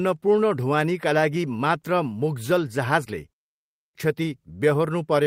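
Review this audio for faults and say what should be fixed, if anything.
A clipped start after a pause at 3.62 s: after a 0.38 s gap, the output needs about 330 ms to wake, so speech resumes abruptly at 3.95 s with its first sounds missing. The waveform jumps from flat silence straight to full level with no rising onset, and the spectrogram shows energy appearing at once across the band. Keeping the output stream running through pauses, fed with silence, would prevent it.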